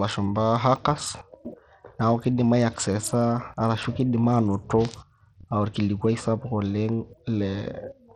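Low-bitrate Bluetooth SBC compression, likely around 80 kbps, starves the upper sub-bands throughout the speech, so the treble flickers and gritty, aliased noise rides on it.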